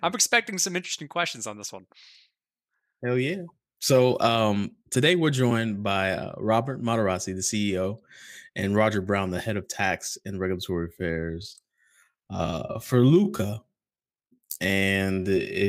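From 10.86 s to the end at 15.68 s the speech abruptly drops to about two-thirds pace (0.665×) with its pitch unchanged, sounding dragged. This is likely a time-stretched section, slowed by software repeating short fragments to lengthen it.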